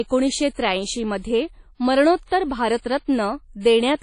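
Throughout the speech, a washy, ringing quality with hiss that rises and falls with the signal points to likely WMA compression, at a rate consistent with about 32 kbps. On a spectrogram, everything above 10.1 kHz is empty, and weak partials break into patchy, speckled blocks.

From 2.24 to 2.28 s there is pre-echo. A sharp attack falls late in a transform block, so the coding noise spreads about 39 ms ahead of it, audible as brief hiss before a softened onset. The waveform shows a noise smear preceding the transient.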